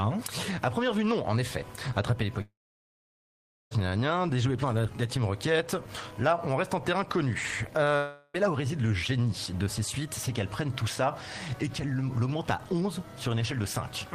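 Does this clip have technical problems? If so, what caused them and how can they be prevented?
Yes. From 2.41 to 3.73 s the sound turns into a fading buzz and then about 1.2 s of silence, and from 7.97 to 8.36 s a shorter smeared stretch of about 0.38 s appears, both likely caused by a long network dropout. The receiver extended the last sound while nothing arrived, and the audio resumes with that portion missing. Unlike a brief packet-loss glitch, the concealment wears thin into silence. Unlike an edit, the audio resumes later in time. A steadier connection and a larger jitter buffer would prevent it.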